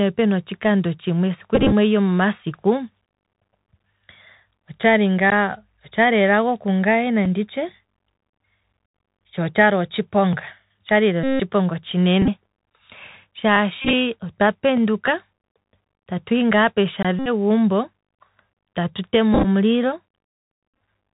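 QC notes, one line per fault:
Throughout: Bluetooth CVSD headset codec. The damage is plainly audible. The speech is cut off above 4 kHz, so it sounds narrow and boxy. The codec sends one bit per sample, saying only up or down, with an adapting step size, which fits a 64 kbps stream. Loud high sounds outrun the step and distort. S sounds turn scratchy. A granular hiss sits under the speech.
1.55–1.72 s, 8.87–8.94 s, 11.24–11.40 s, 12.22–12.29 s, 13.82–13.93 s, 17.19–17.28 s, 19.34–19.46 s, 20.69–20.81 s: Bluetooth headset packet repeated. Lost voice packets were replaced by the last good packet's bits. Each repeat lasts 3.75 ms, so a run becomes a steady buzz near 267 Hz. The 11.24 s event follows "tsho otshali otshiponga otshali" and is the longest, with about 161 ms lost. Several others are scattered, with runs up to about 30 ms.
5.30 s, 7.25 s, 17.03 s: block of digital silence. Samples dropped to zero with no fade, likely from an output buffer not filled in time. 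The 5.30 s gap is 15 ms, just before "otshali elago kungaye". The 7.25 s gap is 5 ms, just after "otshali elago kungaye", and is heard as a tick. The 17.03 s gap is 20 ms and sounds like a brief hole.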